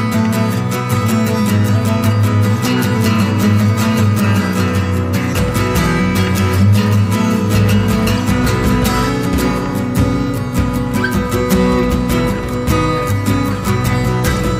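Two brief glitches at 5.32 s and 9.24 s come from damaged data in a compressed stream, where the decoder misreads corrupt frames and resyncs. Each shows as a brief disruption on the spectrogram and a waveform glitch.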